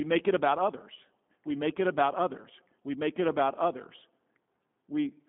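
From start to finish the speech carries G.729 codec damage: plainly rough, slightly synthetic and thin, which fits an 8 kbit/s G.729A stream rebuilding each frame from a filter and a few pulses. A spectrogram shows energy between 150 Hz and 3.5 kHz, nothing above 3.7 kHz.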